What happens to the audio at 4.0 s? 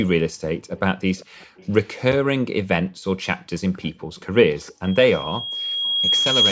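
Around 4.0 s there's an echo leak running from 3.82 to 4.73 s: a faint, delayed copy of the speech trailing about 0.4 s behind, sitting well below the main signal. The likely cause is a far-end loudspeaker whose echo canceller didn't fully scrub what its microphone picked up, so the remnant got sent back down the line.

Inside that stretch, from 3.96 to 4.09 s, the background is gated by the echo canceller. It clamps the microphone down while the loudspeaker plays, so the room sound dips by about 40 dB for roughly a tenth of a second before the canceller lets go and the ambience returns.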